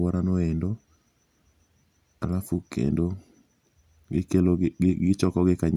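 Speech with no technical faults.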